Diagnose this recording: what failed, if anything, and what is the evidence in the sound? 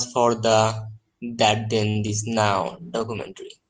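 A late packet at the network and jitter-buffer stage caused a short stall. Around 1.89 to 1.97 s the buffer ran dry, and the receiver held the last sound for about 56 ms until the packet arrived, then resumed from the same point. Nothing is lost from the speech. One sound is stretched, and everything after it sits about 56 ms later than before.

A short concealed packet loss follows at about 2.07 to 2.10 s, again at the network and jitter-buffer stage. Roughly 20 ms of coded audio never reached the Opus decoder in time. The receiver's concealment continued the preceding sound and then crossfaded back into real audio. The result is a brief smear or wobble lasting a few hundredths of a second, and a very short speech sound in that gap can go missing.

From about 2.68 s to the end, a call bitrate drop shows up at the codec stage. The bandwidth estimate fell, and Opus was cut from 40 kbps to 14 kbps for about the last second. 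Coarser coding makes the speech sound rougher and watery. The coded bandwidth also narrows from 20 kHz to 12 kHz, so the top end sounds duller than in the earlier part of the clip.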